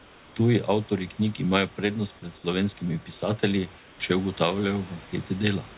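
Speech over a call path that passes nothing above 4 kHz. Discontinuous transmission likely halted sending during pauses, so comfort noise in place of the background fills 0 to 0.36 s and 3.78 to 4.0 s, just after "pred slovenskimi pisatelji". In both gaps the real room noise gives way to a steady, featureless hiss, about 2 dB and about 3 dB quieter respectively.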